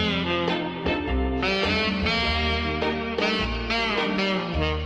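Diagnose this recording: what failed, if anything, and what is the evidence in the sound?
Nothing failed here: every stage from capture to playback seems to have done its job, and there's nothing in the sound pointing to a problem anywhere along the chain.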